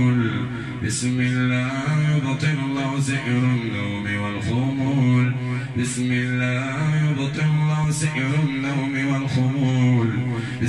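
Nothing in this audio stands out as a technical fault. There are no events to time and no cause to trace.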